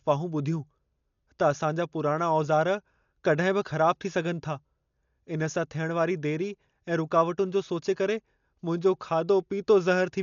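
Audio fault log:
Throughout: Dolby Digital compression, likely from an AC-3 style encoder starved of bits, at a level that points to a rate around 48 kbps. The coder has cut the band so nothing survives above 6.9 kHz, and with so few bits it leaves many frequency lines without real detail and fills them with dither noise. The speech sounds heavily damaged: dull and muffled, with a rough, fluttering grain clinging to voiced tones.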